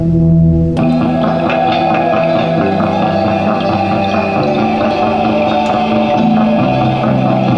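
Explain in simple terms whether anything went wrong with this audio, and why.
Nothing went wrong here.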